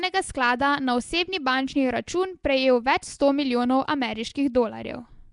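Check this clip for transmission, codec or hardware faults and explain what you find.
One codec fault runs through the whole speech clip. Throughout, the speech carries a rough, hissy halo and a smeared, underwater quality, with nothing above 10.6 kHz. This is likely Nellymoser compression: weak bands receive no bits and are filled with noise rather than the swirly, metallic artefacts of a low-bitrate MP3.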